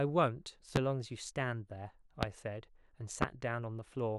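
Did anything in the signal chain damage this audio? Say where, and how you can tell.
Yes. A loud pop hits three times, at 0.76–0.79, 2.23–2.26 and 3.22–3.25 s, each a single burst about 25 dB above the speech. It is likely a voltage pulse in the analogue wiring, such as a plug, switch or static discharge. Speech continues unbroken underneath, unlike a dropout's gap.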